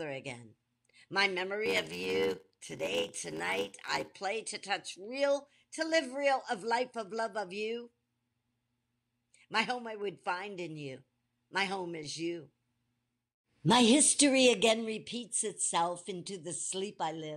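A block size mismatch (padded) runs from 1.65 to 4.12 s. One stage hands over shorter blocks than the next stage reads, which fits 512-sample reads at 44.1 kHz, and the shortfall in each block is filled with silence. Those regular gaps produce a buzz at 86.1 Hz riding on the speech, and the speech plays at 0.861 times its normal speed while its timbre stays about the same.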